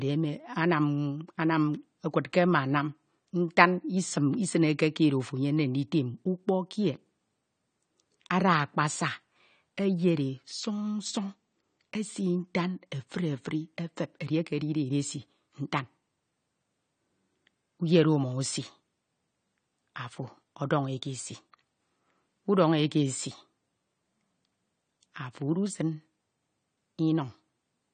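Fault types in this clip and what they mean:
AAC compression: dull, smeared speech with fizzy, warbling sibilants and nothing above 9 kHz throughout, likely from AAC-LC coding at a low rate, around 32 kbps.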